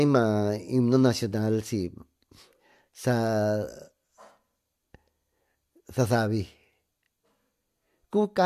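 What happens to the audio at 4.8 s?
Nothing goes wrong at 4.8 s: the speech carries on intact through that moment, with no dropout, click, glitch or other fault.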